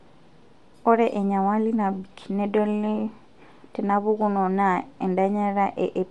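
Speech throughout the clip carries plainly audible Bluetooth LC3 compression. The upper band sounds breathy and grainy, as if noise fills the missing top end, likely from an LC3 link at around 48 kbps with short 7.5 ms frames.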